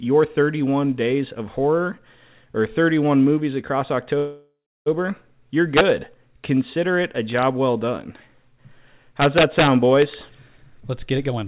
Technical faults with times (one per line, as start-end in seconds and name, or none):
4.18-4.88 call audio freeze
5.77-5.90 integer overflow
7.39-7.43 integer overflow
9.22-9.67 integer overflow
10.02 integer overflow
10.30-11.46 jitter buffer speed-up